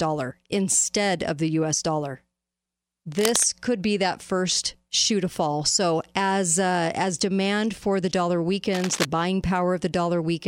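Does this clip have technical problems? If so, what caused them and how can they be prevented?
Yes. Cable scratch noise occurs at 3.19–3.45 s, before "could be that first", and at 8.73–9.05 s, after "demand for the dollar". These are dense, uneven rustling bursts only about 5 dB below the speech. On a spectrogram they appear as ragged broadband smears, and on the waveform as spiky, irregular clusters. The likely cause is a worn cable or connector shifting and changing its contact resistance. Replacing worn leads and fixing connectors firmly in place prevents it.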